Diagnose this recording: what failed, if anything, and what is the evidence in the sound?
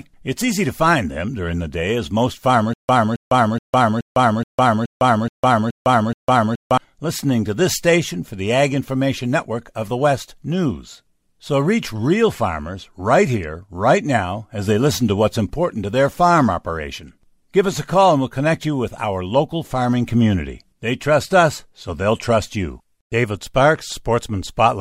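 From 2.74 to 6.78 s, after "the day as most", a stutter with silent gaps: a 269 ms fragment repeats nine times, each followed by 155 ms of digital silence, seen as identical blocks between flat, blank gaps. A playback stall likely replayed the last buffered fragment at each retry, losing the audio beneath.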